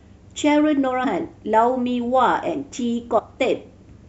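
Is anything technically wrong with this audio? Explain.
Yes, there are two spots with compressed frames skipped in this speech: at 1.03 s, where a couple of frames (around 50 ms) drop out, and at 3.18 to 3.20 s, where roughly three go (around 70 ms). The decoder jumps ahead by whole frames, which points to a 26.1 ms frame length.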